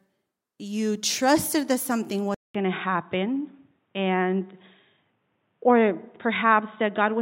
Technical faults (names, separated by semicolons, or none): input switched to a poorer device